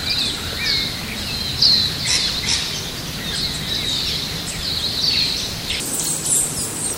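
At 5.80 s the sound suddenly jumps up in pitch and rushes forward, and it stays that way until the clip ends at 6.98 s. This is a section at the wrong speed. The last stretch plays at twice its proper rate, so timing and pitch shift together. Everything sounds around ten semitones higher and hurried. The likely cause is an editor or player running that portion against the wrong clock.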